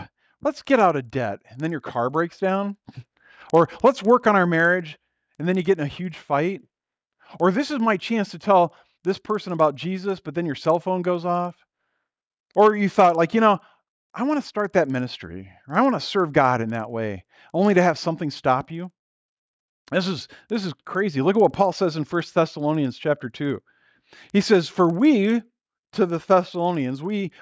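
Resampler restarted on every block, throughout: each 50 ms block was converted alone, so edge errors tick at 20 Hz, a buzz only while speech plays.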